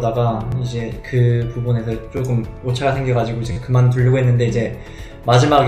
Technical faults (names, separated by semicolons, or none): repeated buffer